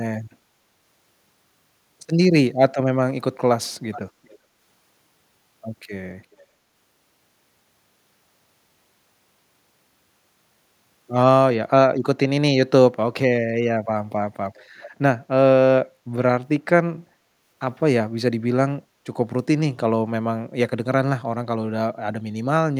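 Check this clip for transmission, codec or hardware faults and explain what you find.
One fault is present: echo leak, in five brief bursts at 3.92–4.01 s, 4.24–4.38 s, 6.32–6.43 s, 14.55–14.64 s and 14.82–14.90 s. An echo canceller on a loudspeaker end likely failed to remove all of its microphone pickup. Scraps of played-back speech return about 417 ms late in the first three and 403 ms late in the last two, roughly 20 to 35 dB below the speech.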